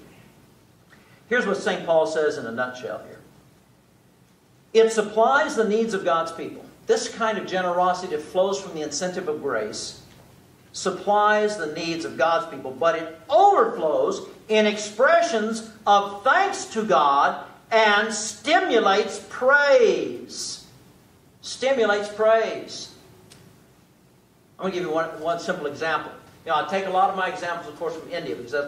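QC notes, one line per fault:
No faults turned up anywhere in the audio. There is nothing to log for this clip.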